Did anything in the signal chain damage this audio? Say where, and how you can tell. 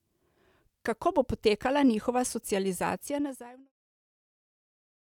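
No, nothing in the chain has damaged this speech; the level eases down in a smooth fade-out from around 2.5 s to 3.73 s, as an editor would shape it, with no click or hard edge at its end.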